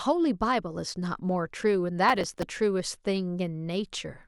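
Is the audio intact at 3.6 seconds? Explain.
Yes, the speech at 3.6 seconds is intact, with no dropout, click, distortion or other fault audible at that moment.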